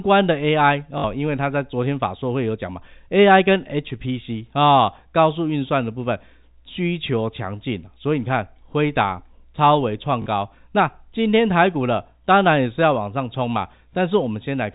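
At 0.98 s, for 60 ms, and again at 10.22 s, for 40 ms, the speech shows packet loss with the last packet repeated: the receiver replayed the final good packet until fresh audio arrived. The runs buzz at about 50 Hz, which fits three and two lost 20 ms packets. The waveform shows identical repeating blocks, and the spectrogram shows flat, comb-like harmonics, all under the 4 kHz ceiling of the G.711 telephone coding.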